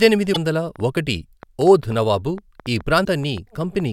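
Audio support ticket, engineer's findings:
Damaged data in the compressed stream: short glitches at 0.30–0.37 s and 3.01–3.07 s. Decoder chokes on corrupt frames, loses sync, skips ahead to the next header.

Train of clicks, 0.76–3.81 s: about fifteen pops, around 4.5 per second, uneven spacing, peaking near speech level. Likely nearby interference or a faulty connection injecting pulses.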